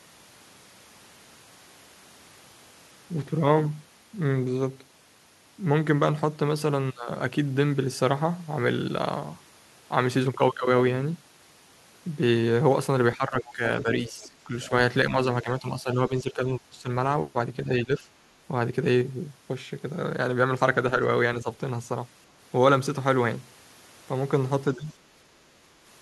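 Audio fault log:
13.16–14.72 s, 15.1–16.89 s, 17.66–18.07 s, 24.77–24.83 s: speech suppressed in double talk. The talker dips by around 10 dB in pieces, likely because the echo canceller ducked near-end speech while the far end was talking.
13.4–13.83 s, 14.2–14.29 s, 14.64–14.68 s, 24.75–24.81 s: other side's voice leaking through. Brief scraps of a second voice sit roughly 15 to 30 dB below the talker, likely residual loudspeaker echo the canceller failed to remove.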